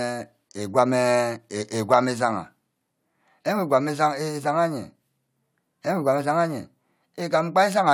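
No technical faults can be heard in this speech recording.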